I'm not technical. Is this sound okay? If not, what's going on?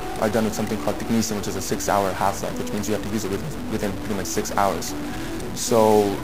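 No. A stuck bit, throughout the clip: harsh, buzzy distortion with noise filling the quiet gaps, likely because one digital data line is jammed at a fixed value.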